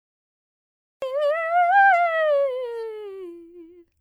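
From 0.0 to 1.02 s there is only digital silence. Then the music cuts in abruptly at 1.02 s, already mid-sound. This is a cut-off start. Capture began late, so the opening attack never arrived. No fade-in is heard.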